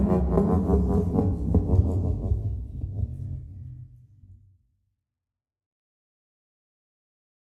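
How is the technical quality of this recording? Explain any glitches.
The signal holds steady throughout, with no dropouts, clicks or other glitches to point to anywhere in the recording.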